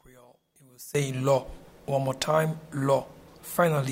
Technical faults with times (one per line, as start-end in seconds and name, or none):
0.00-0.95 one channel inverted